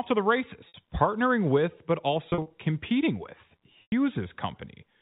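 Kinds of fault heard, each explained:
Packet loss with pitch repetition: short buzzy, held-pitch stretches after "to the" at 0.68 s and scattered near 2.3 s, plus a 100 ms gap after "competing with" at 3.82 s that fades. Lost audio, fitting 20 ms packets, was bridged by repeating the last pitch period.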